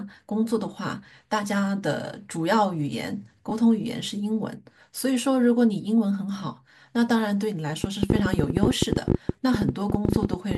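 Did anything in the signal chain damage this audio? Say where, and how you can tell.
Yes. Lost LE Audio frames on the Bluetooth link: a short smeared, noisy patch at 3.49 s lasting about 22.5 ms, which fits three dropped frames, and a 7.5 ms one at 8.66 s. The LC3 decoder filled each gap by replaying the previous spectrum with scrambled phase.

There's also a train of clicks from 7.84 to 10.56 s: roughly 40 similar pops at an uneven pace, about 14 per second, jumping well above the speech level. That pattern points to likely electrical interference or a struggling interface upstream.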